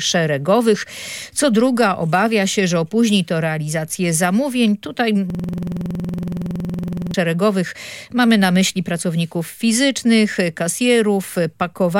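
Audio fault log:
5.30–7.14 s, system hang loop: the system froze while the audio hardware kept replaying one 46.44 ms stretch of its ring buffer, which fits a 2048-sample buffer. That single fragment repeats exactly, about 40 times, giving a rapid, rattling buzz at 21.5 Hz.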